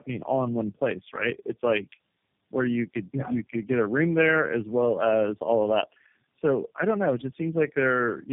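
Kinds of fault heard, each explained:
Tandem speech coding: the call crossed several network links, each decoding the speech and re-encoding it with its own codec, so three separate speech coders worked in turn on already degraded audio. The errors stack. The speech throughout sounds rougher, more muffled and more warbly than a single coding pass would leave it, with nothing above 3.7 kHz. This fits a chain of codecs such as AMR-NB and G.729A joined by G.711 links.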